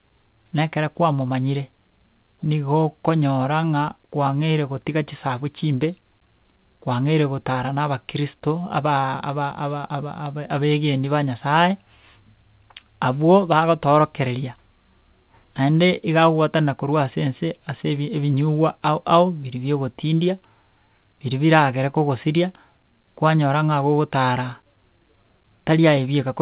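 Nothing stood out on listening to this speech, which comes through a G.711 mu-law call path with the expected band limit around 4 kHz.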